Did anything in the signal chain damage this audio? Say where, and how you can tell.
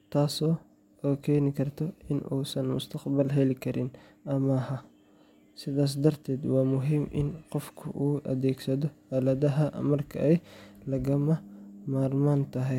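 No, nothing stood out on listening to this speech recording that would point to damage at any stage of the signal chain.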